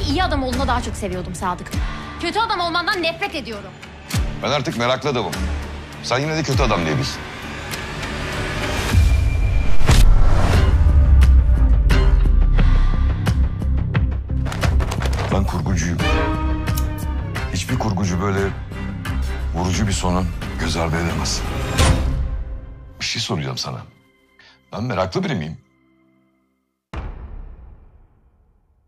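A Bluetooth SBC bit pool drop arrives at 27.14 s and lasts until the clip ends at 28.88 s. The link appears to have congested, and the encoder cut its bit budget to keep the stream going. The degradation is consistent with a bit pool falling from 31 to 12, around 88 kbps. Starved of bits, the upper sub-bands lose their detail and the remaining bands are quantised coarsely. The treble goes dull, and a gritty noise rises through the sound.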